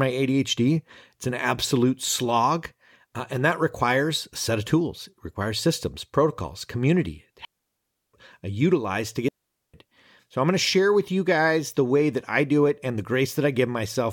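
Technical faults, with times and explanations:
7.45–8.14 s and 9.28–9.74 s, digital wireless dropouts: the audio drops into near silence right after "requires systems protocols community" for about 0.69 s, then again after "I utilize to" for about 0.45 s. The receiver lost too much of the digital stream and muted quickly, so each gap is a clean hole with no noise burst around it.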